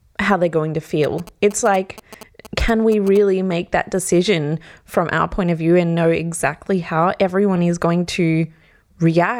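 From 1.04 to 3.17 s, after "how they're going to", GSM signalling bursts come through: a nearby 2G phone's radio pulses, rectified into galloping ticks and 217 Hz buzzing, well under the speech.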